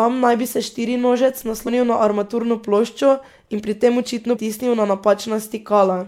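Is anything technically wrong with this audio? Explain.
Yes. Compressed frames are skipped twice in this speech. At 1.66 s, between "naj bi se štirinožec" and "na armaturno ploščo in", roughly 70 ms of audio vanishes, which fits about three 26.1 ms frames. At 4.35 s, after "in pri tem očitno", around 200 ms drops out, consistent with about seven frames. The decoder never plays these frames, so the speech jumps ahead, and overlapping neighbours leave a short smeared blip rather than a click.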